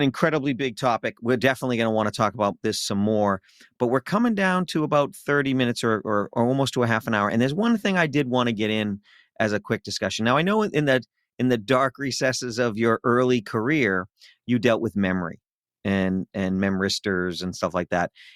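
A speech recording with nothing technically wrong with it.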